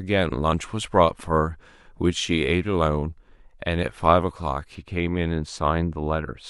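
Speech that turns dull and muffled from 4.75 s to the end of the clip, the sign of de-emphasis applied wrongly: a treble-cut stage meant to undo pre-emphasis has acted on audio that never had it, or has acted twice. The top end falls away smoothly, down about 14 dB at 10 kHz relative to 1 kHz. That gradual tilt, with no sharp edge, sets it apart from a low-pass or codec bandwidth limit, which cuts off abruptly.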